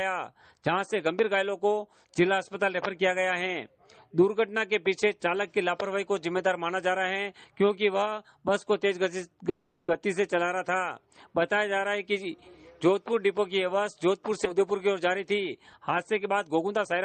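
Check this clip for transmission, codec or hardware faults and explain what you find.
Three transmission faults are audible, all from packet timing on a network call path.

Call audio freeze, 9.49 to 9.91 s. The last sound is stretched into a fading buzz for about 390 ms, likely because delayed packets let the jitter buffer run dry. When audio resumes it continues where it stopped, with nothing lost, only a pause inserted.

Skip ahead, 14.45 to 14.49 s. Roughly 70 ms of audio is dropped while later packets were already queued, and the two sides are stitched together with only about 10 ms of fill. The result is an abrupt forward jump rather than a gap.

Jitter buffer speed-up, 16.02 to 16.98 s. To shed excess delay, the receiver cuts many tiny pitch-period slices, around a tenth of a second in total. The sound plays about 10% faster at unchanged pitch and comes across as rushed.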